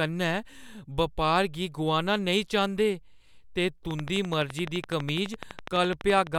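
Speech with a train of clicks from 3.91 to 6.36 s: about thirty regular ticks at 11.9 per second, peaking roughly 10 dB above the signal, likely from interference or a faulty connection or power supply, showing as evenly spaced vertical lines on a spectrogram.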